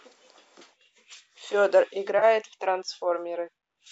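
AAC frame loss with concealment at 2.19 to 2.24 s: roughly 30 ms of coded speech dropped out, which fits three 10 ms frames of the low-delay AAC the clip was likely coded with. The decoder filled the gap from the last good spectrum, leaving a brief smeared, noisy patch.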